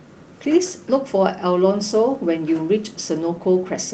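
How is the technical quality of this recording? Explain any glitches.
Nothing stood out as a glitch on listening; the speech simply carries the usual character of a call path, with its top end stopping at about 8 kHz.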